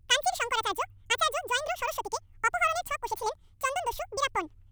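From start to finish the speech plays back twice as fast and a full octave (12 semitones) higher, because the audio is read two samples at a time. Pairs of samples are taken as one frame, halving duration.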